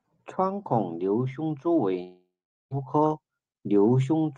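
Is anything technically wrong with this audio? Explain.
Yes, there is one fault. From 2.03 to 2.73 s, just after "孔瘤胸蛛", a likely long network dropout: a fading buzz fills the gap, then about 0.43 s of silence appears as a flat waveform and an empty spectrogram band.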